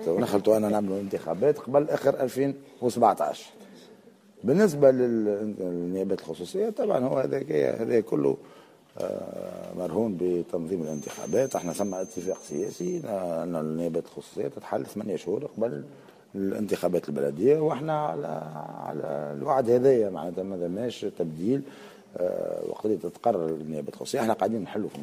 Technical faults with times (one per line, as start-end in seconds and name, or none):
10.77-13.09 feedback whistle